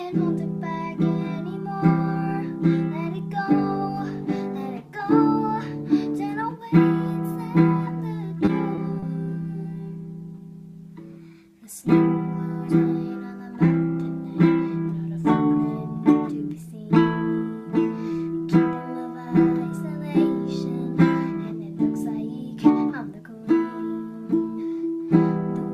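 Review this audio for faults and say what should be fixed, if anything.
Short stalls from a late packet occur at 8.45–8.49 s, 8.75–8.79 s and 8.99–9.04 s. Each time a packet was not there when due, the jitter buffer ran empty, and the receiver held the last sound for about 20 ms, 20 ms and then 30 ms until the packet turned up, then resumed from the same point. Nothing is lost, but each stretch leaves a brief held patch with a slight buzz or dip and pushes the playout delay later by the same amount. To prevent this, give the jitter buffer more headroom or let it adapt faster when arrival times start to vary.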